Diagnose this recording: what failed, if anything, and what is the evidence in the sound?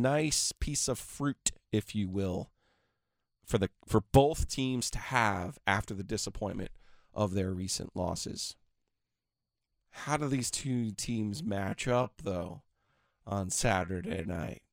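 Time-stretched section from 10.53 s to the end, just after "do these": the speech slows to about 0.69 times its pace yet keeps its pitch, sounding dragged, likely editing software repeating short grains. A spectrogram shows unchanged harmonic spacing with elongated syllables.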